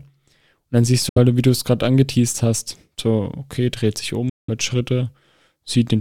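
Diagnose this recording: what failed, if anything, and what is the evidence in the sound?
The wireless playback link most likely failed, a Bluetooth dropout: packets missed their delivery deadline and were discarded, so output fell silent. The speech cuts out abruptly from 1.09 to 1.18 s and from 4.29 to 4.50 s, then resumes further along, as if it had kept playing.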